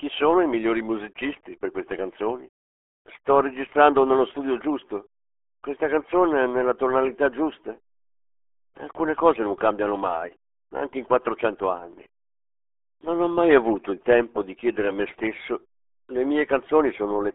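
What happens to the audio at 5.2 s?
At 5.2 s, as across the whole clip, the speech carries RealAudio 14.4 codec damage: a low-rate coder that fits roughly 8 kbit/s squeezes it into a telephone-like band, leaving it muffled and gargly. A spectrogram shows a hard ceiling near 3.7 kHz, with empty space above.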